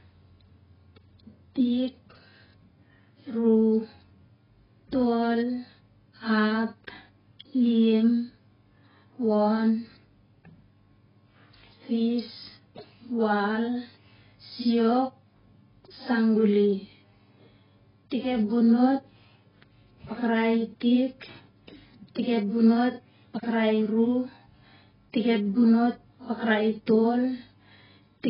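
From start to finish, the speech carries heavy AAC compression damage. Nothing sounds above 5.2 kHz, so it is dull and muffled. Sibilants turn fizzy and smeared, and sustained sounds warble. The likely cause is AAC-LC coding at a very low bitrate, around 10 kbps.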